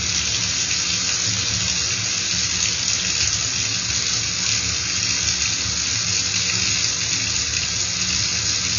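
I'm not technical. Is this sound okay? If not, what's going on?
No. AAC compression damage runs through the whole clip. Nothing is heard above 6.9 kHz, so the sound is dull and muffled, with a smeared, warbly texture. This is likely from squeezing the audio into a very small file, which throws away fine detail.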